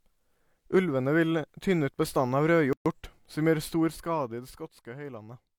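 At 2.73 s the speech just drops out for about 127 ms, through to 2.86 s, then picks up exactly where it left off. That's a gap at a join of encoded pieces. The audio was encoded as separate chunks and stuck back together without trimming, so the encoder's start-up delay and the padding on the last frame both stayed in as dead air. The edges of the hole are smeared by the codec.

Then from 3.75 s to 4.69 s there's zipper noise. The level comes down by roughly 10 dB, but in hard 1 dB steps at around twenty a second instead of a smooth ramp. Every jump leaves a tiny click in the waveform, so you get a fast ticking, zippy texture sitting on top of the speech for the whole time the level is moving, and it stops once it settles.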